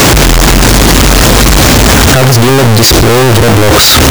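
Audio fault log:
throughout: signed and unsigned mixed up. The 16-bit samples were likely read with the wrong signedness, so the top bit of every value is inverted. Each time the speech waveform crosses zero, the decoded level leaps from one extreme of the range to the other. What comes out is a loud, harsh, buzzing distortion over the whole clip. Pauses and soft syllables sit at the same blaring level as the loudest parts.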